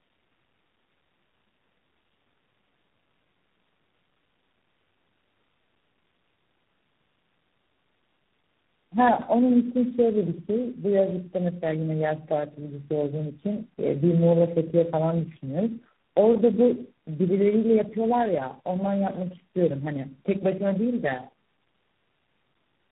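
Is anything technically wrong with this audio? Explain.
Yes. The speech shows tandem speech coding throughout. Its character points to about four low-rate speech codecs in a row, with the signal decoded and encoded again at each link. Each coder works on the already degraded output of the one before, so the errors compound. The result is rougher and more muffled than any single codec would make it, with a warbly, unstable quality. Nothing remains above 3.8 kHz, which adds to the dull, narrowband sound.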